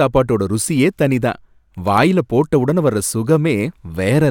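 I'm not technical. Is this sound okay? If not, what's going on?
No. Throughout the speech there is a block size mismatch (truncated) problem: one stage of the system hands over audio in longer chunks than the next stage takes in, and the leftover end of each chunk is thrown away. The chopping repeats steadily and makes a low buzz at about 47 Hz, which fits chunks of 1024 samples. The pace and pitch of the speech stay normal.

From 1.86 to 2.03 s, between "ருசியே தனி தான்" and "போட்ட உடனே", there is processor overload crackle. The computer was too busy to finish a handful of very short audio chunks, each under a millisecond, in time. Each missed chunk left a tiny patch of silence with sharp edges. Together they make a brief burst of crackle over the speech, and it stops once the computer catches up.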